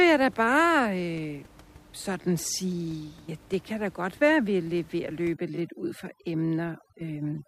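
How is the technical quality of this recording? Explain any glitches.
The one real problem is overdone noise removal near the end. The room noise itself sits about 26 dB below the speech. From 5.33 s, right after "vi er ved at", to the end at 7.48 s, the denoiser clamps down on every frequency band it mistakes for noise. The background drops and breaks up into twinkly specks, and the quieter parts of the voice get stripped along with it.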